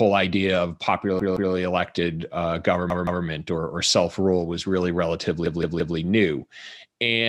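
Speech with three stutters from a repeated buffer. A 171 ms piece plays twice more at 1.20–1.54 s and 2.90–3.24 s, and three more times at 5.46–5.97 s. Each repeat joins hard. New audio came late, so the device replayed its last block, which fits an 8192-sample buffer.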